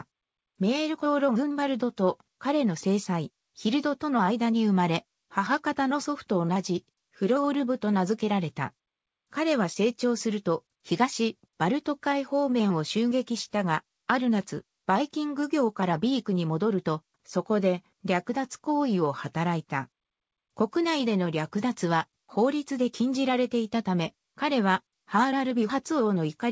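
No technical faults are audible.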